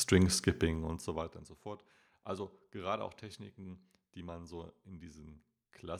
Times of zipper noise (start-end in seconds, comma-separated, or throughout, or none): 0.54-1.53